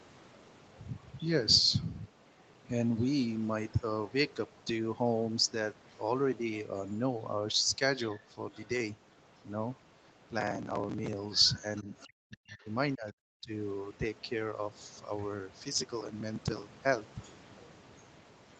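From 1.02 to 2.6 s a faint second voice sits underneath the talker, about 30 dB down. It returns from 6.54 to 10.28 s at a similar level, from 11.35 to 12.56 s louder at about 20 dB down, from 13.95 to 15.27 s very faint, and from 17.24 s to the end at about 20 dB down. This is the other side's voice leaking through, likely loudspeaker playback that the echo canceller did not fully remove. Unlike crosstalk or background chatter, it comes and goes with the far end's turns.

From 10.40 to 11.13 s, and again from 15.72 to 16.83 s, a gritty tearing crackle rides on the sound and then stops. This is processor overload crackle. Dozens of tiny audio buffers, each a few milliseconds long, missed their deadline and were skipped. Each skip leaves a hard-edged discontinuity, and together they run as a dense burst. A single dropout would be one clean gap instead, and a codec glitch would not have this rapid, even texture.

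From 11.83 to 13.52 s the talker's level dips and cuts out in pieces, about a second in total and sinking as far as around 40 dB at the deepest point. This overlaps the louder leak of the far voice. This is speech suppressed in double talk, likely the echo canceller ducking its own talker while both sides spoke. Unlike a network dropout, the gaps follow the far voice's activity, and the cuts sound like gain pulled down, with no glitchy breakup.

The audio is band-limited at 8 kHz, as expected from the Opus call path, and that is not one of the faults.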